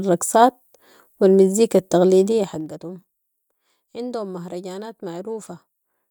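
Zipper noise from 2.24 to 2.8 s: the speech level falls by roughly 15 dB in unsmoothed 2 dB steps, around twenty a second. Each abrupt jump leaves a small click, so a rapid ticking rides on the speech while it fades.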